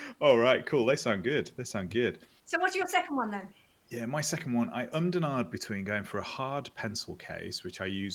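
No technical faults can be heard in this speech clip. A faint room noise sits underneath, about 40 dB below the speech, and it belongs to the recording space rather than to any fault of the system.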